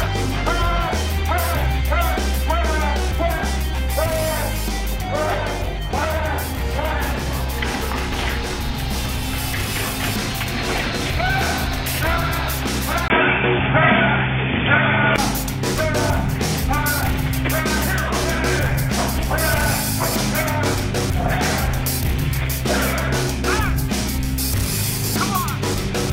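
At 13.08 s the sound drops out for about 20 ms. From there until 15.18 s the audio loses everything above 3.5 kHz, so it turns dull and boxy. The level shifts by a few decibels, and a new noise floor appears, roughly 40 dB below the signal. This is likely an input switched to a poorer device, such as another microphone or a headset's call profile. That device passes a narrower band and has its own tone and noise. At 15.18 s the full band returns.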